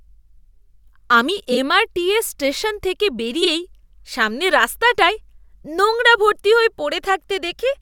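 Frames out of order at 1.52 to 1.58 s and 3.42 to 3.48 s: two adjacent short blocks, which fits 23.2 ms frames, play swapped, giving a garbled flutter.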